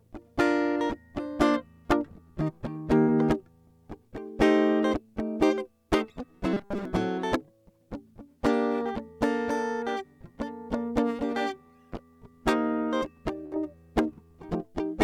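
At 3.01 s the music breaks up in a burst of packet loss lasting until 3.10 s. For about 64 ms the receiver stretches the last sound it had and fades it down, and about 60 ms of the music never arrives. On a waveform the envelope sags smoothly and then jumps back in. On a spectrogram the harmonics turn into flat, dimming horizontal lines with a clean vertical edge where real audio resumes.

From 6.53 s to 6.85 s the music turns into a rigid metallic buzz, the robotic sound from repeated short buffers. The likely cause is that new audio arrived too seldom and the player kept looping the last 5 ms chunk, which imposes a fixed 200 Hz pitch while most of the real material in that stretch is skipped. The waveform shows a tightly repeating 5 ms pattern. The spectrogram shows evenly spaced horizontal bands at multiples of 200 Hz that ignore the music's own harmonics.

At 13.46 s a second burst of packet loss runs to 13.54 s. 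About 59 ms is filled by a decaying continuation of the previous sound, and about 60 ms of the music is missing. It looks the same as the first burst, with a fading, frozen spectrum followed by an abrupt restart.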